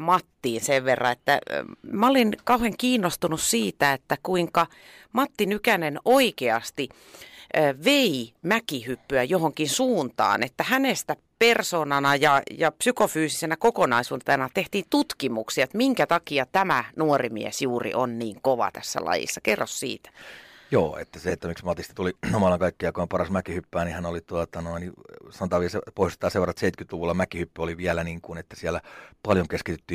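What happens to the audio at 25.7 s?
At 25.7 s the speech continues cleanly, with no dropout, click, distortion or other fault at that point.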